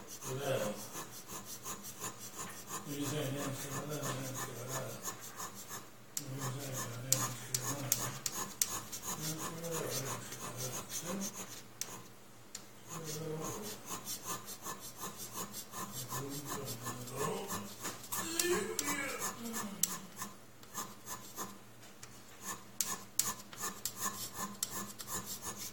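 Nothing here goes wrong; the audio runs along without a single glitch worth pointing out.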